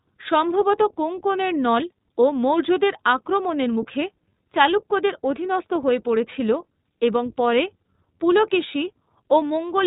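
Throughout the speech, the iLBC codec's narrowband coding removes everything above 4 kHz. A spectrogram shows a hard ceiling there. Each frame's excitation is coded independently, which fits 20 ms frames at 15.2 kbps, leaving the voice plainly rough and synthetic.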